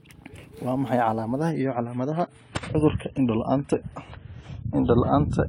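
At 1.5 s the speech suddenly drops in quality and stays that way to the end: an adaptive stream at a lower bitrate. The player switched renditions with no gap, and nothing survives above 10 kHz, which fits a fall from around 96 to 24 kbit/s AAC.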